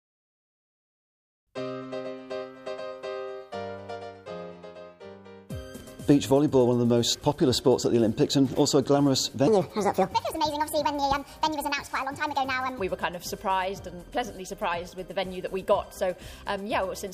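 At 9.47 s the sound suddenly lurches into a section at the wrong speed, running about 1.48 times faster than it should until 12.79 s, when it drops back to normal. Because speed and pitch move together here, everything turns hurried and jumps up by roughly seven semitones, that chipmunk-ish lift. The likely cause is that stretch being played or rendered against the wrong clock rate.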